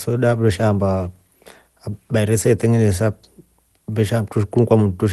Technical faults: none

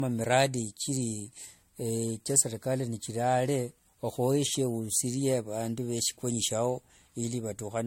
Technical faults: generation loss

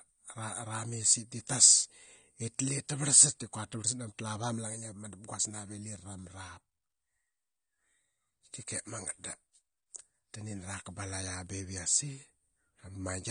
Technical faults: AAC compression

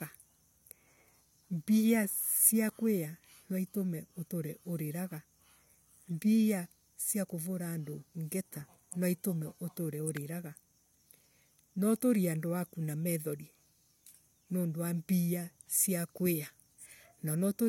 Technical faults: electrical switching spike

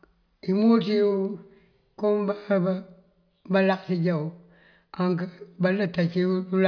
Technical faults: none

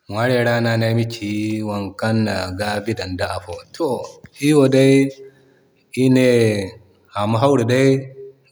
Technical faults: automatic gain rising

